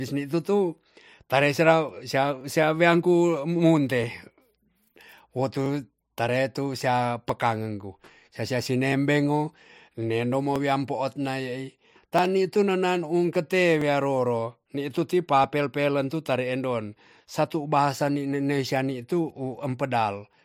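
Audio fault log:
0.78–20.33 s, clock drift buffer slips: a click every 1.63 s while speech plays, likely mismatched device clocks forcing about 30 samples to be dropped or repeated.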